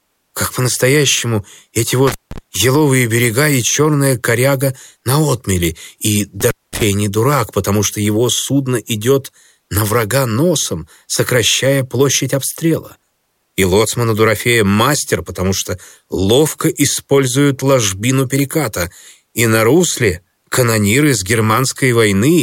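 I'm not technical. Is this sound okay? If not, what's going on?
No. The speech has an intermittent contact fault: a loose cable or plug briefly loses connection, so the signal drops out. It happens twice, from 2.08 to 2.38 s and from 6.41 to 6.83 s. Each time there is a crackle as the contact breaks and again as it reconnects. In between, the sound is gone for about 170 ms the first time and about 220 ms the second, with faint hiss remaining.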